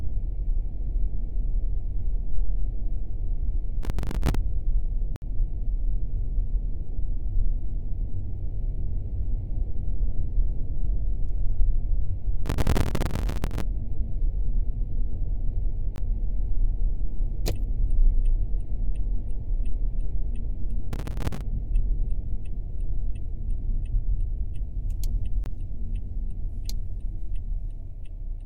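A recording of everyday sounds, broken up three times by bursts of gritty, tearing crackle, from 3.83 to 4.35 s, from 12.46 to 13.63 s (the longest) and from 20.93 to 21.41 s. This is processor overload crackle. The processor kept missing the deadline for its short audio buffers, around 5 ms each, and each missed buffer was filled with a stale scrap of old audio with hard edges. The result is dozens of tiny jagged repeats in quick succession, roughly seventy in the middle burst. Separately, the sound drops out completely for a moment at 5.16 to 5.22 s, a short 60 ms hole, and again at 15.96 to 15.98 s and 25.44 to 25.46 s, where the 20 ms gaps land as short holes. Each is a block of digital silence. Samples were replaced by silence with no fade in or out, so the sound cuts out and comes back abruptly at every gap.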